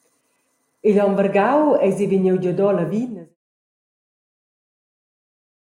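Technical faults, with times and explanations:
No technical faults detected.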